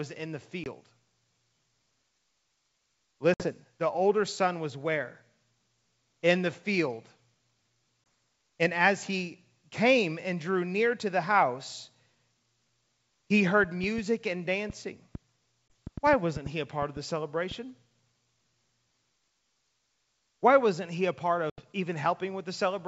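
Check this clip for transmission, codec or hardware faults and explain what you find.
Yes, there are faults: five dropouts from packet loss on an ADPCM call, heard over clear G.722 wideband coding.

Packet loss on an ADPCM call: abrupt silent holes at 0.64–0.68 s after "in the", 3.34–3.50 s before "the older son was", 8.04–8.06 s, 15.69 s, and 21.50–21.60 s after "wasn't he a part". After each hole the audio returns slightly distorted before settling. About 20, 60, 20, 20 and 80 ms of audio are missing, which fits one, three, one, one and four lost 20 ms packets. Silence replaced the lost packets, and the decoder's predictor and step size fell out of step with the sender's until they resynchronised.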